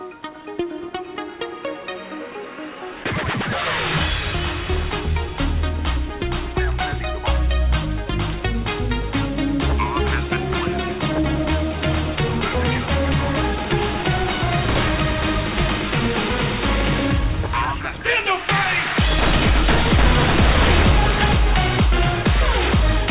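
No technical faults can be heard anywhere in the audio. It passed through a WebRTC call path whose narrowband sound, with nothing above 4 kHz, fits a G.711 mu-law codec at 64 kbps.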